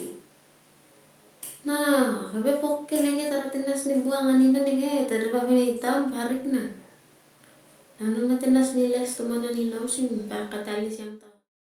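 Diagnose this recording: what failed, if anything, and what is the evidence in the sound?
Nothing in this speech recording points to a failure at any stage, and the level easing down from around 10 s to 11.52 s is a smooth fade-out of the kind an editor applies, with no click or hard edge.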